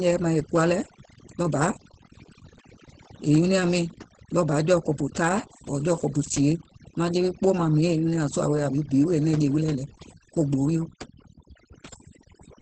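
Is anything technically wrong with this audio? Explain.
Yes, there are two faults, and both run through the entire speech clip.

Overdone noise removal: a noise reduction stage was set far too aggressively, cutting any frequency band near its noise estimate and taking the quieter parts of the voice with it. The background drops and breaks up into twinkling specks.

Opus voice compression: the speech went through Opus in its SILK linear-prediction mode, coded coarsely at a rate that fits roughly 12 kbps, with nothing above 8.4 kHz. The damage is plainly audible: the voice sounds muffled, hoarse and slightly robotic, with the top of the band missing.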